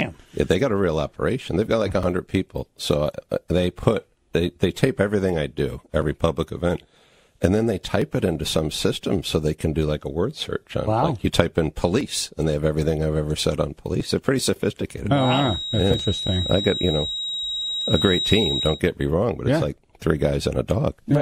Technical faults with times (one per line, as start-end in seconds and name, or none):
2.03 overlap between stream segments
8.02 overlap between stream segments
15.10-18.83 feedback whistle
15.99 overlap between stream segments